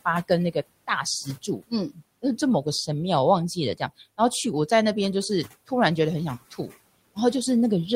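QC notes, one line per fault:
1.25–1.72 s and 1.90–2.01 s, speech cut by the noise suppressor: the suppressor mistook soft bits of speech for the room noise and pulled them down by about 18 dB, so they sound swallowed.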